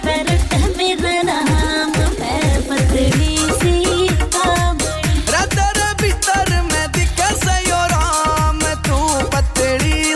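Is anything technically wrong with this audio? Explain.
No, nothing stood out as technically wrong on listening.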